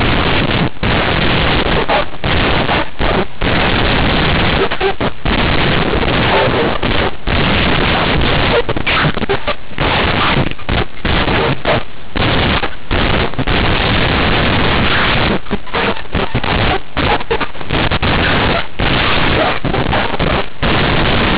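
A-law telephone bytes are being played out as plain linear 8-bit samples, with no expansion step, so this speech recording suffers from companded audio read as linear for its whole length. Because the logarithmic codes are taken at face value, every sign change throws the output across roughly half its range and quiet passages come out as loud as strong ones. The result is a harsh, very loud, buzzy distortion, with heavy noise filling the pauses, layered over band-limited telephone audio sampled at 8 kHz.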